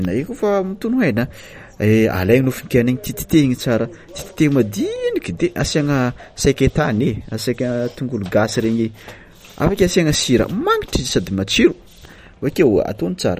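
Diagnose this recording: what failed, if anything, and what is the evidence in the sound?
The codec stage is the culprit, with likely MP3 compression throughout. Nothing survives above 15.3 kHz, and the plainly audible artefacts point to a starved bitrate, around 48 kbps.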